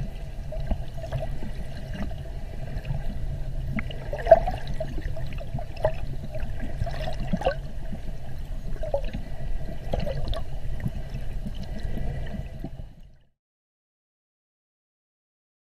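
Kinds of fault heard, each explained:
Nothing here needs flagging, and the gentle easing down of the level near the end, finishing around 13.4 s, is just a deliberate fade-out doing its job.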